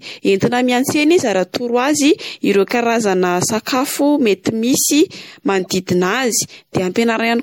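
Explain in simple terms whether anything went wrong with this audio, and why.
Yes, two things went wrong. Throughout the recording the speech sounds watery and swirly, the crisp top end is dulled, and the s sounds come out with a metallic fizz. That is the signature of MP3 compression, likely squeezed hard to save space. When the encoder runs short of room, it cuts off the highest frequencies and drops quieter details, which flicker in and out from moment to moment and create that shimmering, underwater quality.

Between 5.59 and 5.67 s there is also a brief, unnatural chirp or burst of noise laid over the speech, lasting under a tenth of a second. This is a corrupt frame decoded. Part of the compressed data was damaged, but the player played it anyway, and the misread information put sound at the wrong pitches. The length of the glitch points to a few consecutive chunks of data being hit.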